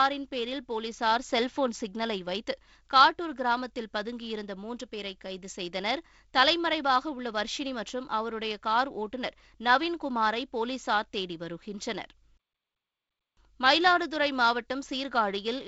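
A speech clip with nothing technically wrong with it.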